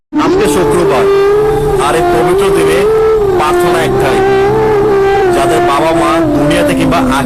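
Nothing in the audio jumps out as a technical problem, so there's no fault to point to here.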